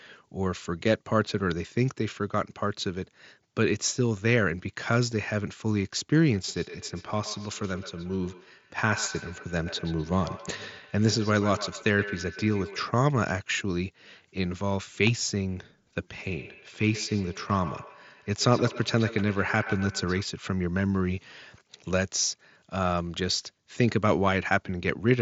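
From 6.48 to 12.88 s, and again from 16.23 to 20.27 s, there's a feedback echo between two devices. The speech comes back roughly every 150 ms, peaking about 14 dB below the direct sound, because a second device's speaker loops into the other's microphone. It sounds thin and ringing over the band-limited mSBC headset audio.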